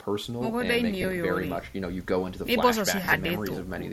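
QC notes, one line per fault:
1.02–1.04 s, lost LE Audio frames: a 20 ms gap that the LC3 decoder patched by reusing the last spectrum with randomised signs, leaving a brief noisy smear.
3.04–3.14 s, lost LE Audio frames: 70 ms lost in bursts over 100 ms, the longest around 40 ms. The repeated spectrum with randomised signs blurs the sound into a hissy smear that starts fading during the longest burst.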